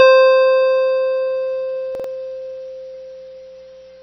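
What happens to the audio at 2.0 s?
Around 1.95 to 2.04 s there's a chunks-out-of-order glitch. A roughly 46 ms block plays one slot late, so the music jumbles briefly. Underneath, the music sounds dull and watery, with nothing above 6 kHz, which is likely heavy MP3 compression at a very low bitrate, around 24 kbps.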